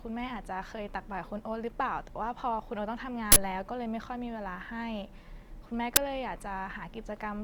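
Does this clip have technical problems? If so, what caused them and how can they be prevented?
Yes. Two short, harsh bursts of digital noise cut sharply into the speech: one from 3.32 to 3.36 s, lasting 40 ms, and a briefer one at 5.96 s, about 10 ms long. Both come from an uninitialised buffer. A block of audio was played out before any samples were written into it, so whatever stale data sat in that memory was read as sound, producing loud, unrelated noise for exactly the span of the block. Clearing or zero-filling buffers before playback, and never sending a block downstream until it has been fully written, prevents this.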